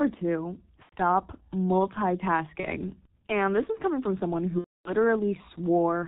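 G.723.1 codec damage runs through the whole speech clip and is heavy. Nothing reaches above 4 kHz, so the voice is muffled, and the coder's slowly updated voice model leaves it hoarse, with smeared consonants. The sound fits the codec's low bitrate of about 6.3 kbit/s, with detail thrown away in 30 ms blocks.

VoIP packet loss concealed by the speech codec first appears from 0.83 to 0.93 s. About 90 ms of audio, probably three 30 ms frames, is missing, and the decoder fills the gap by extending its last pitch and filter at falling gain. The result is a short smear, muted on the third lost frame. A smaller dropout at 2.60 to 2.66 s, about one frame, leaves a brief stretch of extrapolated sound. The worst comes just after "is coming from someone", from 4.59 to 4.92 s. About 270 ms is lost there, and the extrapolated sound fades and is muted from the third lost frame on. The voice stays weak and distorted for a moment after the stream returns, because each frame is rebuilt from the one before it.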